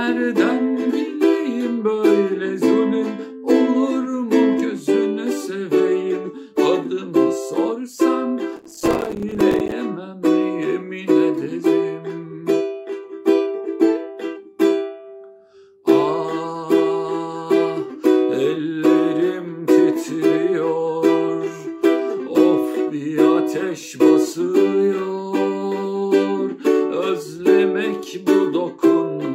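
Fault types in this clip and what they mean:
Processor overload crackle: from about 8.57 to 9.72 s, the machine falls behind and keeps missing the deadline to deliver each small chunk of audio, so dozens of tiny silent holes get punched into the sound in quick succession. Each hole has hard edges, so together they come across as a gritty, tearing crackle riding on top for just over a second. Each hole lasts one very short buffer of around 5 ms.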